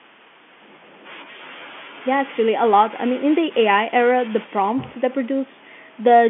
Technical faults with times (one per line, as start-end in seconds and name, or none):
none